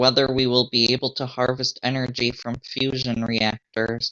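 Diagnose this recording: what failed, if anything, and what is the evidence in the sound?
Nothing failed; no faults found.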